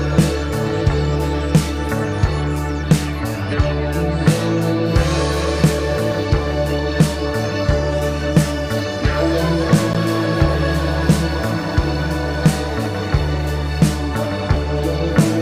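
At 9.93 s a likely Bluetooth dropout silences the sound for 14.5 ms, a thin blank stripe on the spectrogram, then playback resumes mid-stream.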